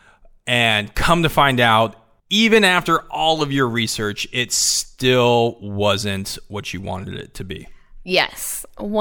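No technical faults can be heard anywhere in this speech recording. There is nothing in the audio that needs a time mark or an account of something going wrong.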